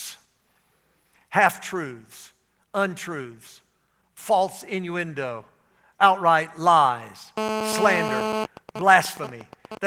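GSM phone buzz, 7.38 to 8.44 s in this speech, right after "false innuendo outright lies": a nearby 2G phone in a call emits 217 bursts per second, which the audio circuitry rectifies into a hard, raspy buzz about 4 dB below the speech. GSM signalling bursts, 8.45 to 9.78 s: with that phone's user now silent, only short burst groups are sent, giving quieter even ticks with a longer 217 Hz buzz twice a second. Opus voice compression sits underneath, leaving only light coding softness.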